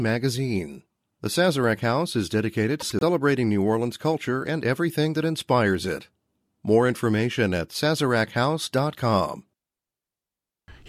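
Frames out of order, from 2.80 to 3.03 s, just after "is dedicated": two neighbouring runs of four frames, each about 96 ms long, reached the decoder swapped and were played back in that order. The short stretch therefore comes out with its halves exchanged, heard as a brief garbled flutter. Nothing is lost, so the timing around it stays intact.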